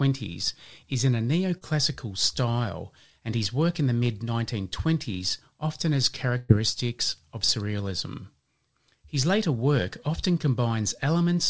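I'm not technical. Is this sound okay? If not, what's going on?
No. Short concealed packet loss at about 1.58 to 1.64 s, just before "style and his work": about 30 ms of the call arrived too late, so the receiver stretched the last sound to cover it, giving a brief smear.

Burst of packet loss at about 6.37 to 6.52 s, right after "often has": roughly 120 ms went missing. The receiver filled about 113 ms by continuing the last sound and fading it out, as a held buzz or a fading hiss, then jumped ahead.

The call route itself also leaves nothing above 8 kHz.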